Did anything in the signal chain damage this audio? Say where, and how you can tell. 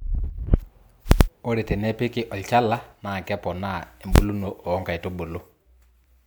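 Yes, in two places. The first is at the processing stage, where samples are calculated before output, and shows up as invalid numbers at full scale. From 1.12 to 1.21 s there is a very loud pop, about 93 ms of nothing, then another pop, which fits a 4096-sample block. At 4.16 to 4.18 s a single bang lasts about 23 ms, which fits a 1024-sample block. A calculation yielded infinite or undefined values, and each block was forced to the maximum positive or negative level.

The second is at the codec stage, where compressed frames were skipped. At 4.44 to 4.47 s the speech jumps forward by roughly 200 ms, which points to around four frames of 46.4 ms each that were missing or rejected as corrupt by the decoder. The missing stretch of speech never plays.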